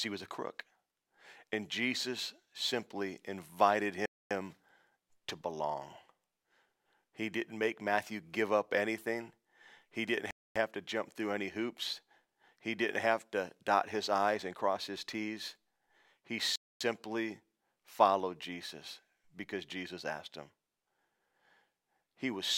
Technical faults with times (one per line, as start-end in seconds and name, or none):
4.06-4.31 gap between chunks
10.31-10.56 gap between chunks
16.56-16.81 gap between chunks